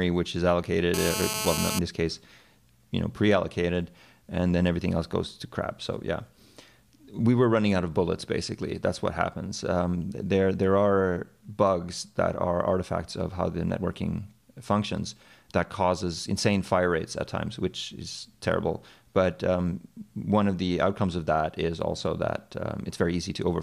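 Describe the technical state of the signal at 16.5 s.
At 16.5 s the signal is intact, with no audible technical fault.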